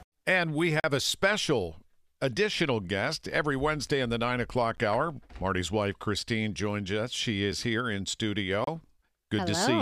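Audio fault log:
0.80–0.84 s, 4.77 s, 8.64–8.67 s: block of digital silence, three times. The speech drops straight to silence and comes back with no fade. The 10 ms one at 4.77 s is barely more than a tick, while the 40 ms and 30 ms gaps read as short holes. This is likely the output buffer not being filled in time, so zeros go out instead of audio.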